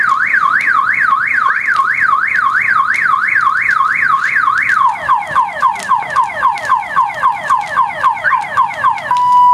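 The input gain was likely set far too high for the microphone, so a fast limiter or compressor clamps down each time a loud sound arrives and lets go as it fades, producing gain pumping throughout the clip. The level visibly and audibly breathes, swinging by around 5 dB as the gain is pulled down and released. Loud and soft passages sit closer together than they should, giving the audio a squashed, compressed character.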